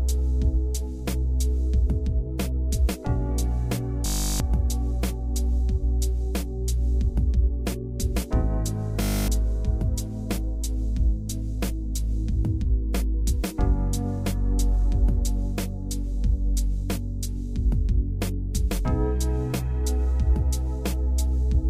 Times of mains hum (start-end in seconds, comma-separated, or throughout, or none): none